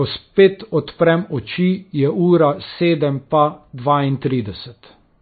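Speech runs throughout with a hard treble ceiling near 4.6 kHz and watery, swirling sibilants, pointing to heavy MP3 compression, likely at a very low bitrate; unlike plain low-pass filtering, it also smears and warbles.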